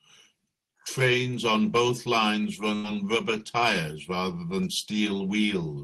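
At 2.75 s, right after "on both lines", a burst of packet loss hits the call stream: roughly 80 ms of audio never reaches the player in time. The receiver bridges the hole by extending the last sound and fading it out for about 81 ms, so a brief held, dimming sound replaces the speech. When playback resumes at 2.86 s with "rubber tyres rather than", the audio picks up further along, with the lost stretch simply gone.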